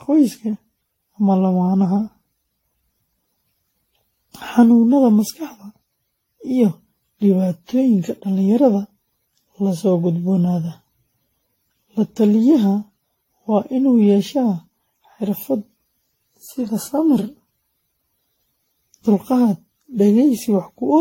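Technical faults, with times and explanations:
Throughout, generation loss. The speech sounds swirly, smeared and hollow. Consonant attacks blur instead of landing cleanly. Nothing is present above about 16.6 kHz. The damage is heavier than a single encode would leave. The likely cause is repeated lossy coding, around ten passes through an AAC-type codec at a rate that fits 64 kbit/s. Each pass requantises on a shifted frame grid, so noise and spectral gaps accumulate.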